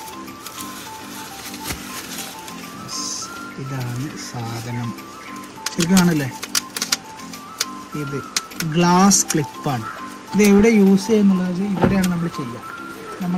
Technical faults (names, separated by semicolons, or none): none